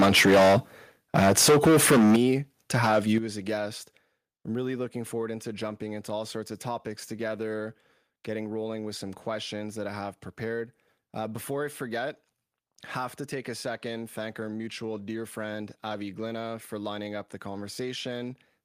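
A speech clip. Harsh, crackling distortion on the loudest syllables at 0 to 0.58 s, 1.15 to 2.25 s and 2.74 to 3.17 s points to microphone overload, likely from input gain driving the converter about 14, 15 and 5 dB past its limit. Sudden level drops at 2.16 s and, just before "as a guest I'm", at 3.18 s are likely the microphone volume being stepped down by about 11 and 8 dB.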